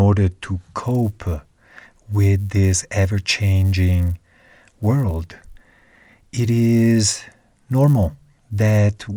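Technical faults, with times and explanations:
0.78 to 8.78 s, resampler restarted on every block: a steady 100 Hz buzz rides under the speech wherever there is signal. Each 10 ms block was converted alone, fitting a 24 kHz to 48 kHz step, so each block edge lacks its true neighbouring samples and ticks.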